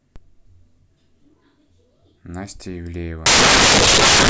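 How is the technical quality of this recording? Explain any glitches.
The recording has one clear glitch in its final second. Samples built from the wrong bytes run from 3.26 s to the end at 4.30 s. Each sample's bytes are assembled misaligned or in swapped order, so the rapidly changing low bits become the dominant part of every value. The speech turns into loud, harsh broadband noise, close to white on the louder sounds.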